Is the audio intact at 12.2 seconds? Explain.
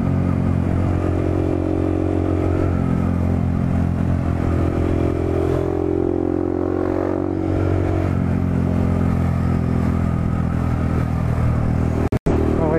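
No, a corrupt frame muted gap runs from 12.08 to 12.32 s. Damaged compressed frames were rejected and replaced by abrupt silence. Timing stays intact, unlike a dropout that shifts everything after it.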